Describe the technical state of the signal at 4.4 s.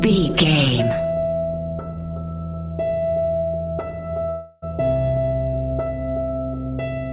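At 4.4 s the signal sits inside a gap from 4.30 to 4.64 s, most likely a long network dropout. For about 0.32 s no new audio reaches the receiver, so it fills the hole by extending the last sound it had, heard as a buzz that fades but never falls fully silent. The audio resumes at 4.64 s with that stretch simply missing, and through the G.711 call path nothing reaches above 4 kHz.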